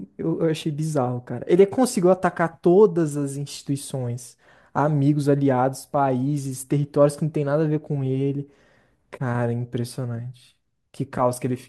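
No technical faults can be heard anywhere in the recording; the speech signal stays continuous and steady throughout.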